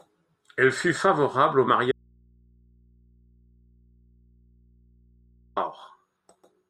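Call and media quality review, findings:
Speech cuts out abruptly after "fut favorable au" at 1.92 s, returning at 5.56 s; the 3.65 s gap carries only mains hum, roughly 35 dB below the speech. Audio dropout to a faint residue, likely signal loss upstream with an open, still-live input path.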